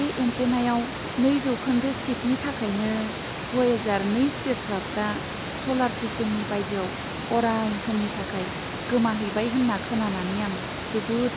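No technical faults can be heard anywhere in the speech.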